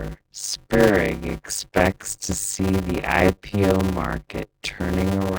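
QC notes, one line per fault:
Throughout, block size mismatch (padded): one stage is writing shorter blocks than the next stage reads, and the shortfall in each block is filled with silence, which fits 256-sample writes landing in larger read blocks. The speech is broken by a short zero gap every block, so a buzz at 100 Hz rides over it. Because the padding stretches the timeline, the speech runs at 0.533 times normal speed.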